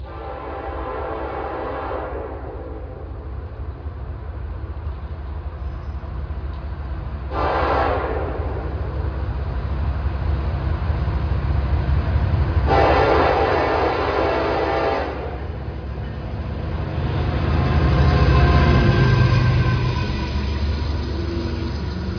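The signal stays technically intact throughout, with no audible dropouts, distortion, level jumps or timing disturbances anywhere in the recording.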